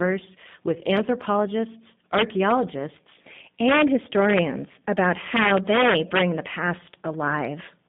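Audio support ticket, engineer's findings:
G.729 codec in the speech path, whole clip. Low-rate model-based coding, fitting 8 kbit/s, resynthesises speech from a filter, pitch predictor and sparse pulses; line band 150 Hz–3.6 kHz. Result: narrow, muffled top end with plainly audible rough, synthetic texture.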